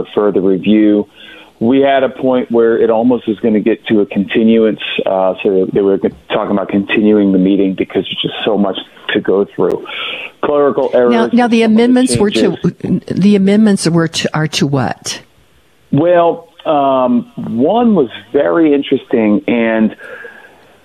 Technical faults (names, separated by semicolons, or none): gap between stream segments